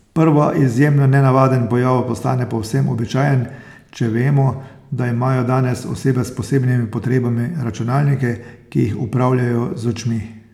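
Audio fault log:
No faults heard anywhere in this speech recording.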